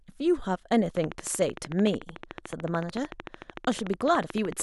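A steady ticking runs over the speech from 0.97 s to 4.61 s, a train of clicks arriving at a regular 13.5 per second, around fifty in all, each much the same sharp pop and peaking about 10 dB above the speech. The ticks carry on through pauses as well. The cause is likely interference from nearby equipment or a faulty connection or power supply, injecting much the same pulse at a fixed rate into the signal path.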